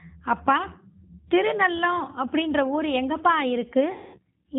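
Speech coded throughout with the G.729 codec, a low-rate VoIP coder whose plainly audible roughness fits about 8 kbit/s. It rebuilds the voice from a vocal tract filter, a pitch predictor and a few pulses per frame, so everything above 4 kHz is gone and the speech sounds muffled, slightly buzzy and synthetic. From 3.92 to 4.19 s there is VoIP packet loss concealed by the speech codec. About 220 ms of audio went missing, which fits roughly eleven 20 ms packets. The decoder filled the gap by repeating its last pitch and filter at falling gain, so the speech smears into a fading buzzy tone or coloured noise, and it stays weak and distorted briefly after audio resumes.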